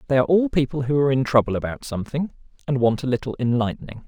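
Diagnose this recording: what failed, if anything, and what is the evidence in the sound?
The failure is in sample-rate conversion: imaging from linear upsampling, present throughout. Above 12 kHz the spectrum holds a faint mirrored copy, roughly 45 dB down, heard as metallic shimmer on sibilants. That fits 24 kHz material interpolated to 44.1 kHz. Unlike aliasing, nothing folds below 12 kHz.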